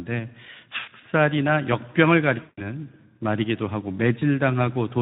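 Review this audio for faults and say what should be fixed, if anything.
Speex codec damage runs through the whole clip: a hoarse, noisy CELP texture that fits a low-quality mode around 11 kbps. A higher-quality or wideband codec setting would prevent it.

VoIP packet loss concealed by the speech codec appears at 0.79 to 0.89 s, 2.41 to 2.67 s and 4.19 to 4.23 s. In each gap the decoder extends its last pitch and filter into a fading buzzy tone or coloured noise, the longest gap being 160 ms. Jitter buffering or forward error correction on the network path would prevent it.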